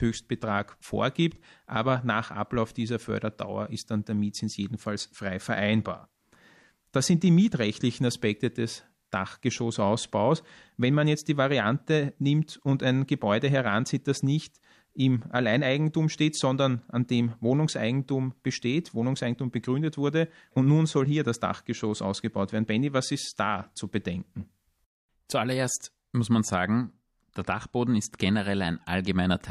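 At 25.27 to 25.30 s a short hiss, about 17 dB up, smears just ahead of a sharp onset: pre-echo, from quantisation noise spread across a roughly 36 ms long transform block.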